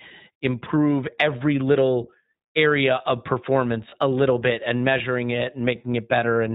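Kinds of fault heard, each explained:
iLBC codec: narrowband speech coding that cuts everything above 4 kHz and leaves the voice plainly rough and slightly synthetic, consistent with 20 ms frames at around 15.2 kbps.
Lost iLBC frames: one 20 ms frame drops out at 3.90 s, after "little area of performance", and is filled with a brief held vowel, slightly buzzy or breathy, before "a little bit and" resumes cleanly.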